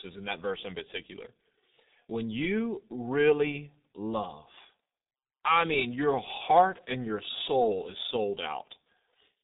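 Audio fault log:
throughout, G.723.1 codec: speech is muffled and hoarse, with nothing above about 3.8 kHz and smeared consonants. The heavy damage suggests a bitrate near 6 kbit/s, and the slow 30 ms frame updates blur fast transitions between sounds.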